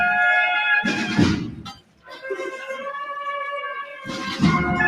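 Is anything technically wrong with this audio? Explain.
Yes. A noise suppressor built for speech was left running on non-speech material: the noise suppressor applied to music or sounds treats steady content as noise, so gain swings by about 10 dB throughout, making held sound pump and tails thin while attacks survive.

The sound is also cut by the noise suppressor at two points. From 1.50 to 2.25 s it mistakes sustained sound for noise and pulls it down by as much as about 19 dB. From 3.84 to 4.10 s a milder dip reaches about 6 dB.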